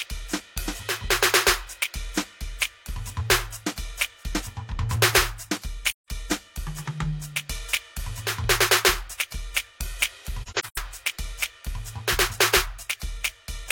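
AAC frame loss with muting hits this music clip twice. From 5.88 to 6.08 s, about 0.17 s of sound drops out, which fits four consecutive lost frames. From 10.43 to 10.78 s, roughly 0.21 s is lost in gaps spread over 0.34 s, the longest around a tenth of a second. The decoder zeroed each missing frame's spectrum, and the overlapping windows fade the music out and back in, leaving soft-edged holes.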